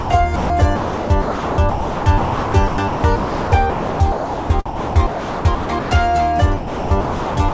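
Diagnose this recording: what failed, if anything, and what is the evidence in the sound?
Two short sound drops by the voice detector show up in call processing, at 0.00 to 0.10 s and again at 0.36 to 0.50 s. The sound gives way to steady comfort noise for roughly 0.1 s each time, likely because the sender's detector judged those moments quiet enough to stop transmitting.

From 0.76 to 5.91 s and again from 6.57 to 7.53 s, the sound is chopped by the voice detector, with stretches replaced by comfort noise. That's about 3.7 s and 0.7 s of replaced sound respectively, likely the detector toggling transmission on and off repeatedly. The G.722 path itself carries nothing above 8 kHz.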